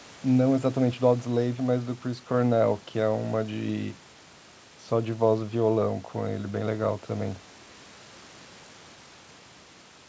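Nothing stood out on listening to this speech; it comes across as a wideband call recording with no content above 8 kHz.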